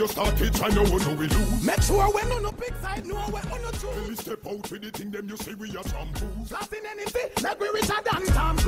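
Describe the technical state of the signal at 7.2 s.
At 7.2 s the signal is in a stretch of zipper noise, running from 6.94 to 7.36 s. The level is being moved in coarse jumps of 3 dB, with no smoothing between them. There are about seven jumps a second, adding up to a change of around 10 dB. Each jump puts a small click into the waveform. Together they make a ticking, zipping texture that rides on the sound while the level travels.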